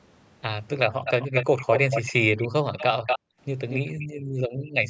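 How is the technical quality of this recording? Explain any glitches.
The recording has two recurring call problems: a delayed repeat of the speech and brief holes in the room sound. Both point to a speakerphone on the far end.

An echo leak occurs from 1.04 to 2.13 s, then at 2.38–2.48, 2.77–2.84, 3.06–3.19 and 3.69–3.91 s. A copy of the speech trails it by 232 ms, likely because the echo canceller let loudspeaker pickup through. The copy sits about 5 to 10 dB below the speech, and near 3.1 s it is about as loud. On a spectrogram it shows as duplicated harmonic bands shifted right.

Background gated by the echo canceller follows at 3.19–3.39 s and 3.94–4.75 s. The canceller clamped the microphone, so the room noise falls by about 40 dB, for a fifth of a second and then most of a second. The waveform's noise floor flattens to near silence, and the spectrogram shows dark vertical gaps. Everything above 8 kHz is absent across the clip, which fits ordinary call processing.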